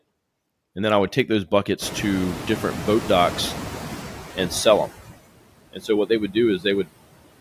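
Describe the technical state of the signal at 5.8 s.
At 5.8 s the noise suppressor cuts speech from 5.73 to 5.89 s, just before "what they would". It misjudges part of the speech as noise and pulls it down by up to about 15 dB for roughly 150 ms, so that stretch sounds swallowed and faint. Noise suppressor artifacts also run through this moment. The suppressor pushes the steady noise down by about 20 dB frame by frame, so the residue rises under the speech and sinks between phrases. That noise is the room noise, which rose around 2 s and sits about 12 dB below the speech.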